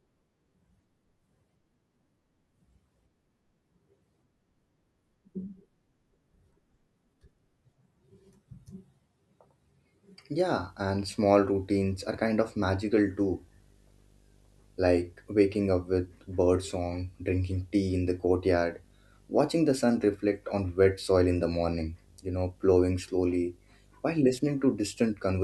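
From 10.52 s to the end, video or display buzz sits well below the speech: a screen or video cable couples into the audio, giving a 50 Hz field-rate buzz with hash above it and a thin 15.6 kHz line-rate whine. A spectrogram shows steady horizontal lines at 50 Hz harmonics and 15.6 kHz.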